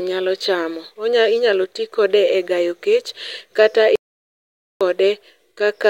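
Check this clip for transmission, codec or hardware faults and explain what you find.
One fault: an audio dropout to silence from 3.96 s to 4.81 s. The speech stops mid-flow and about 0.85 s is silence with no room tone. That points to the input being lost, likely through a disconnected device, failed link or mute, while the recorder kept writing silence.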